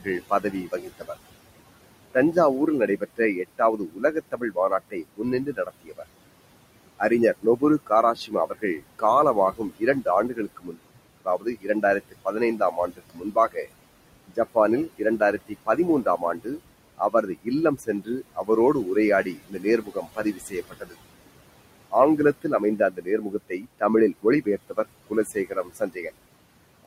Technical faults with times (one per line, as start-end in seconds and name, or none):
0.00-26.87 noise suppressor artifacts
0.04-1.10 speech cut by the noise suppressor
2.14-6.04 speech cut by the noise suppressor
6.99-13.67 speech cut by the noise suppressor
14.28-20.96 speech cut by the noise suppressor
21.91-26.07 speech cut by the noise suppressor